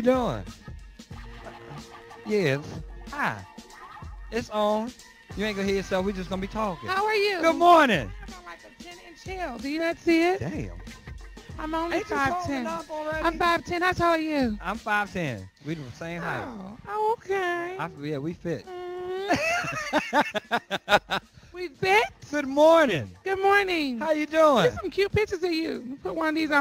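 No technical faults can be heard anywhere in the audio.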